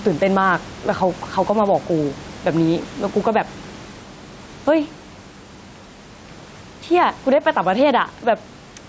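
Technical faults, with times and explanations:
Throughout, gain pumping: the gain swings by about 10 dB, likely from input gain set far too high with a fast limiter clamping it. Unlike a noise gate, the background never drops to silence.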